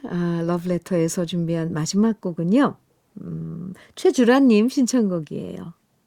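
A speech recording, with nothing technically wrong to report in it.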